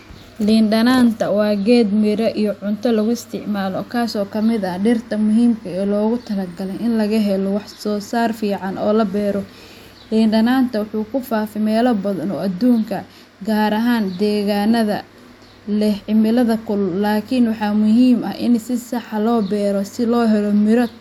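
No technical faults are audible anywhere in the recording.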